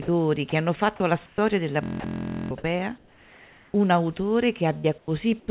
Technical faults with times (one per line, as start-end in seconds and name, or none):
0.02-1.38 sound chopped by the voice detector
1.83-2.51 system hang loop
2.00-2.04 sound dropped by the voice detector
2.62-2.64 onset clipped by the voice detector
2.98-3.74 comfort noise in place of the background
3.72-3.74 onset clipped by the voice detector
4.78-5.48 sound chopped by the voice detector